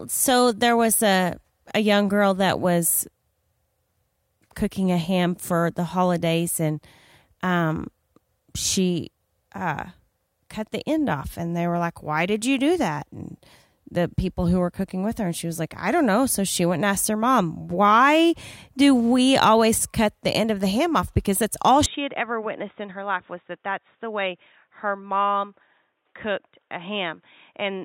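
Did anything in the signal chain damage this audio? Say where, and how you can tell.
Yes. At 21.86 s the speech abruptly turns dull and boxy, cut above 3.8 kHz and about 5 dB quieter. The input was likely switched to a poorer device.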